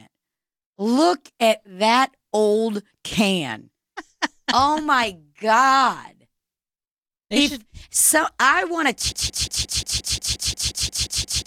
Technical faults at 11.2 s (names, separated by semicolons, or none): broken-record loop